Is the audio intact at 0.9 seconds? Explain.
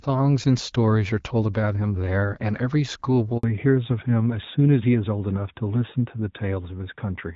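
Yes, the speech at 0.9 seconds is intact, with no fault at that moment; it plays through the AMR wideband (HD Voice) codec at 12.65 kbit/s, which keeps it clear.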